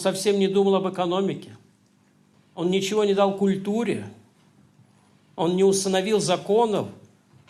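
Nothing in the audio stood out as a technical problem on listening.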